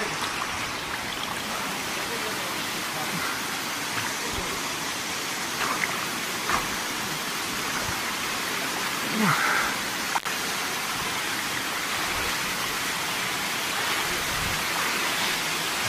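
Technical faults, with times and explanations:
10.18–10.25 s, intermittent contact: the signal drops out for about 65 ms with a crackle at each edge, leaving only faint hiss during the gap. A loose plug or cable conductor briefly lost contact, opening the circuit, then reconnected with a scratchy transient.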